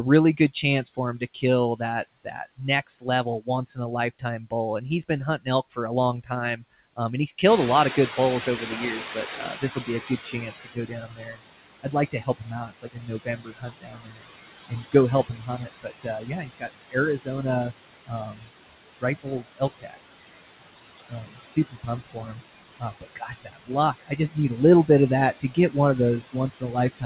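Speech recorded in a room and carried over a narrowband call path, with nothing above 4 kHz, which fits a G.711 mu-law link, shows noise suppressor artifacts for its whole length. The suppressor pulls steady background down by about 17 dB in each band, frame by frame, so the noise drops away in the pauses and swells back beneath the talking. Speech cut by the noise suppressor occurs repeatedly where the algorithm mistakes parts of the speech for noise and attenuates them along with the background. Between 0.37 and 4.52 s, roughly half a second of material drops by up to about 16 dB. Just after "he's been", in the span from 5.38 to 7.43 s, about 0.3 s is pulled down by up to about 18 dB. From 7.96 to 19.98 s the losses total around five seconds, dipping as far as about 22 dB, and from 20.98 s to the end they reach about 20 dB. Soft consonants and word endings come out swallowed or faint. 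Noise suppressor catching up runs from 7.45 to 10.55 s. At about 7.5 s the room noise jumps by about 15 dB, to sit about 10 dB under the speech. The suppressor's noise estimate lags behind that jump, so the new noise passes with less reduction at first and then sinks over 3.1 s to about 14 dB of reduction.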